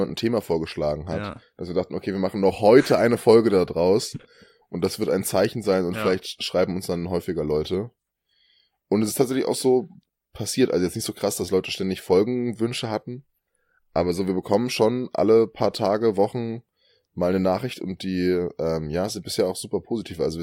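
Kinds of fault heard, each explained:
No faults turn up anywhere in this speech recording, so there's nothing to list here.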